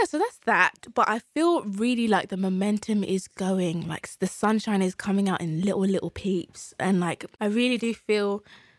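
No technical faults to report anywhere in the recording.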